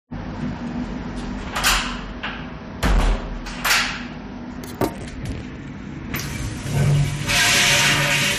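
Hard clipping appears five times: 1.57 to 1.79 s, 2.83 to 3.13 s, 3.65 to 3.83 s, 4.81 to 4.85 s, and from 6.77 s to the end. The sound is driven past what the signal path can carry, by about 7 to 15 dB, so the peaks are cut flat. Those squared tops add harsh high harmonics, heard as crackle on peaks and as a harsh fuzz where the overload is largest.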